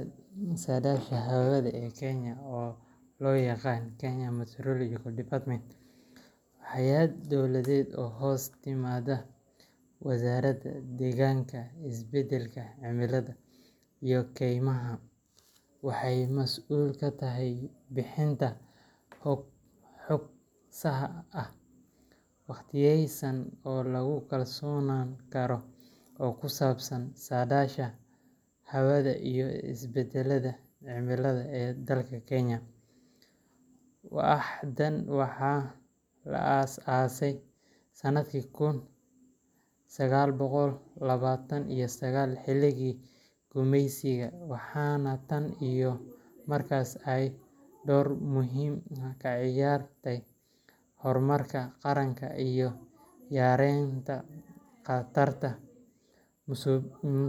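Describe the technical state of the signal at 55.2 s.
At 55.2 s the speech signal is intact, with no audible technical fault at that moment.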